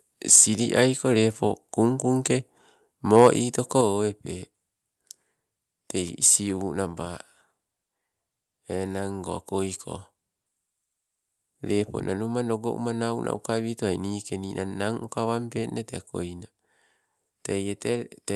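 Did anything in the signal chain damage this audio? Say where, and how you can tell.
Yes. The converter stage was overdriven, which is microphone overload. The input gain was likely set high enough that the loudest peaks ran past full scale, so their tops were sheared flat. From 0.32 to 0.44 s the speech peaks exceed the limit by about 9 dB, with roughly a tenth of the samples flattened, and the result is a harsh, crackling edge. From 3.16 to 3.27 s it happens again, milder at about 3 dB over, with only a few percent of samples clipped.

The call processing stage then changed the level, a microphone volume stepped down event. At 0.36 s, right inside the first overload, the speech and the background noise drop together by about 3 dB in a single step. At 3.81 s they fall again by about 4 dB, shortly after the second burst of clipping. This pattern, an abrupt drop in everything at once following distorted peaks, points to the software likely cutting the device's input gain in response to the overload. 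The high end stops near 12 kHz throughout, which fits the Opus call path.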